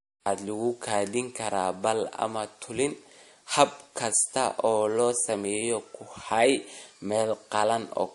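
Right from the start the speech carries the smeared, swirly character of transcoding between lossy codecs, likely a low-bitrate MP3 pass followed by WMA. The second encoder spends bits on the first one's artefacts, both textures overlap, and nothing survives above 11.2 kHz.

Then, just after "lagu kaydin", clock drift buffer slips start at 1.38 s and run to 7.48 s. You get a click roughly every 2.04 s, about four in all. That's likely two clocks disagreeing by something like 100 ppm, with a handful of samples dropped or repeated each time.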